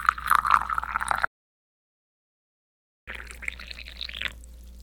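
From 1.25 to 3.08 s, an audio dropout to silence cuts the sound to silence, likely because the input was lost while recording continued.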